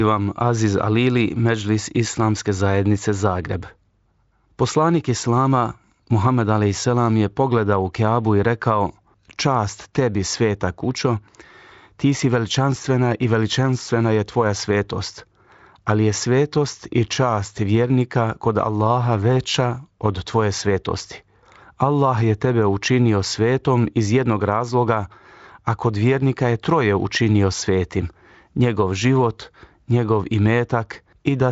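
Listening through this speech recording, nothing stood out as a technical fault.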